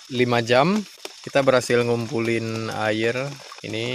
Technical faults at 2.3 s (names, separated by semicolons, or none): none